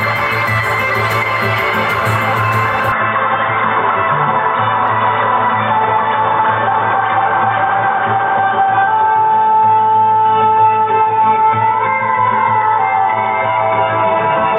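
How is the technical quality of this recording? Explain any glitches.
The recording has one clear fault. At 2.92 s the input was likely switched to a poorer device, which passes a narrower band and adds its own background. From there to the end, nothing comes through above 3.8 kHz, so the sound turns dull and boxy. There is no gap at the switch and little level change, but a new noise floor appears roughly 30 dB below the signal.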